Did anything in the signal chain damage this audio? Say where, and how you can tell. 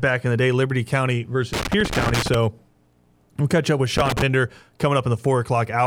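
Yes, it's loose connector crackle in the analogue wiring: irregular bursts of scratchy crackle from 1.53 to 2.35 s, and again from 3.97 to 4.22 s right after "we'll catch up with". A worn contact making and breaking chops the speech into ragged fragments.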